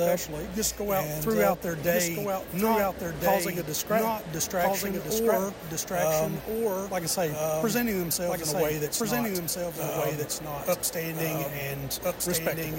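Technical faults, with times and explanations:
Throughout, doubled audio track: everything you hear comes back a second time about one and a half seconds later, at roughly the same loudness as the first pass, so the two layers overlap. The repeat is full-band and dry, with no tail or room sound. That points to a straight copy rather than an echo, likely from the audio being captured twice along a slower second path, or two copies left out of step in an edit.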